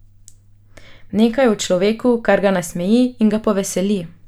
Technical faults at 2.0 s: none

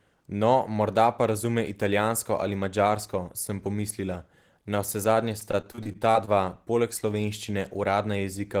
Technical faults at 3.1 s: none

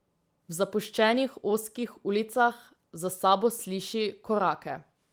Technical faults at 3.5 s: none

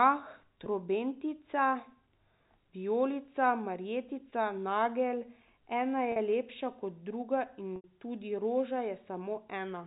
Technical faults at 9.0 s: none

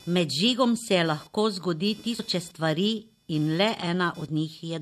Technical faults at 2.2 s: computer activity noise; compressed frames skipped

